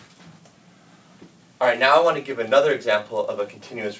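Throughout the clip, the resampler restarted on every block, treating each 10 ms block in isolation, consistent with a 24 kHz to 16 kHz conversion. Each block edge picks up a small error, so a steady 100 Hz buzz rides along wherever sound is present.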